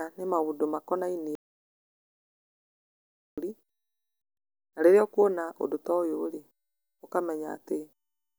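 A speech recording with an audio dropout to silence. At 1.35 s the sound stops dead mid-flow. It stays silent until 3.38 s, then resumes just as abruptly. That is about 2.02 s of missing audio. No room tone or noise floor survives in the gap, and whatever was said there is gone. The input was likely lost briefly, through a disconnection, link failure or accidental mute, while recording carried on writing silence.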